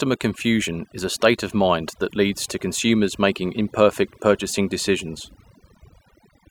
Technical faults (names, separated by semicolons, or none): overdone noise removal